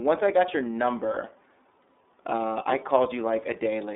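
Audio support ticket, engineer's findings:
iLBC codec, throughout. Band held to about 250 Hz–3.7 kHz, nothing above 3.8 kHz; speech plainly rough and synthetic. Independently coded 30 ms frames, consistent with the 13.33 kbps mode. Unlike a plain telephone band-limit, the excitation itself sounds coarse.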